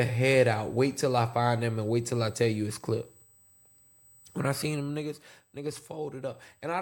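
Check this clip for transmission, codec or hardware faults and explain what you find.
One hardware fault is present: USB whine, running through the whole clip.

USB whine, throughout: the bus draws current in 125-microsecond microframes, and that pulsing leaks into the power or ground feeding the audio. It adds a fixed 8 kHz tone, strongest at its 16 kHz harmonic, a thin steady whistle roughly 35 dB below the speech.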